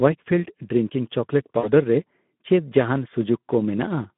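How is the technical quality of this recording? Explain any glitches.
Quality's pretty rough. The whole clip runs through the Speex codec, and the damage is plainly audible. The speech sounds hoarse and grainy, with a noisy buzz riding on it, because this CELP codec has too few bits to model the excitation properly. The grit fits a setting around 11 kbps. Everything sits in a narrow phone band of roughly 150 Hz to 3.5 kHz, so there's no air or low body either.

The one real glitch runs from about 1.59 to 1.71 s: VoIP packet loss concealed by the speech codec. About 40 ms of audio went missing, which fits two lost 20 ms frames. The decoder filled the gap by repeating its last pitch and filter settings while turning the level down, so you hear a short smeared stretch that fades. Since each frame is built from the previous one, the sound stays weak and a bit distorted for a moment after the stream picks back up, out to around 1.71 s.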